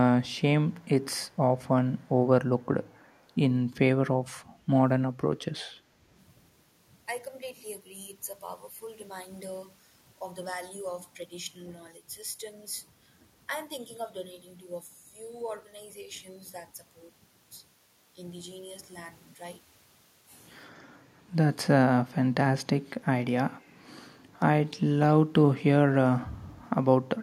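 A speech recording with two faults. An echo canceller at the far end, likely working from a loudspeaker, failed to remove all of the sound it picked up, so an echo leak returns a copy of the audio delayed by 281 ms. It is very faint, far below the main speech, and surfaces as short scraps at 0.27–0.41, 0.73–1.05, 1.28–1.37, 1.97–2.09, 2.61–2.66 and 2.83–3.23 s, all in the first few seconds. Later, when both sides talk at once, the canceller likely cannot tell the local talker from loudspeaker echo and turns the speech down with it. This speech suppressed in double talk produces a slight dip at 21.19–21.24 s and a deeper drop of roughly 10 dB lasting about a fifth of a second at 24.22–24.40 s, where the speech briefly sinks.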